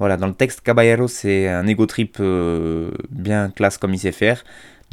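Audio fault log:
No faults detected in this speech.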